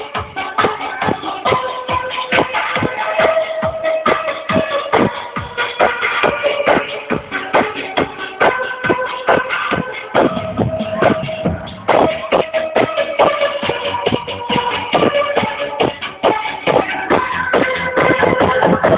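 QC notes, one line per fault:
No faults found; nothing to log.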